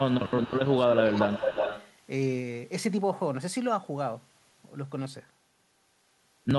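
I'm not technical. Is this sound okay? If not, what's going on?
No. During roughly the first second and a half, from 0.0 to 1.5 s, the voice keeps sinking and coming back. It gets noticeably quieter, loses its crispness, or drops out in short pieces, about a second's worth in all. This is speech suppressed in double talk. Both people were likely talking at once, and the call's echo-removal system couldn't tell this voice apart from the other side's loudspeaker sound, so it turned everything down together.

Around the same time there is also a second copy of the voice trailing behind it. It appears at 0.1 to 0.48 s, 0.66 to 0.7 s, 0.93 to 1.02 s and 1.31 to 1.91 s. It arrives about a quarter to a third of a second late. In the first two spots it is very quiet, but in the last two it is nearly as loud as the voice itself. This is an echo leak: a loudspeaker's sound likely reached a microphone, wasn't fully cleaned out, and was sent back down the line.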